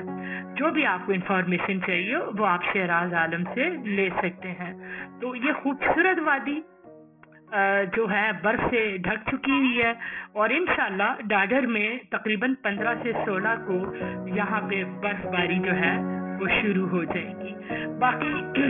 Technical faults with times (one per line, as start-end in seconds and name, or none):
0.00-18.70 aliasing